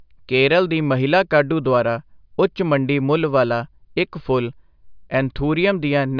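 No technical faults turn up anywhere in this speech recording. Nothing in it breaks, drops out or distorts at any point.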